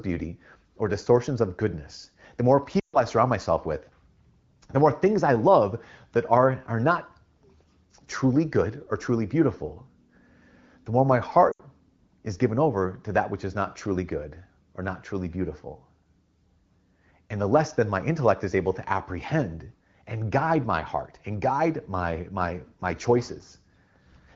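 Around 2.79 to 2.99 s, right after "of goodness the more", and again at 11.51 to 11.62 s after "the more my", there are lost AMR speech frames: the decoder stretches the last good sound and fades it out over these short gaps, so it smears and dips.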